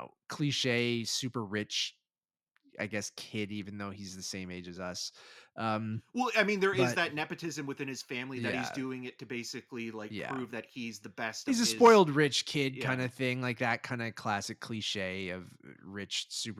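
No technical faults occur at any point, so there is nothing to describe in time order.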